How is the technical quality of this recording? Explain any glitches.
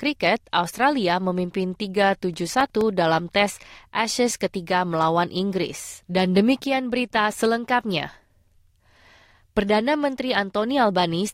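One glitch stands out. From 2.34 to 2.81 s there is processor overload crackle: the processor repeatedly missed its deadlines for short buffers, around 3 ms each. Roughly ten of them went out as silence, leaving hard-edged gaps that add up to a gritty crackle.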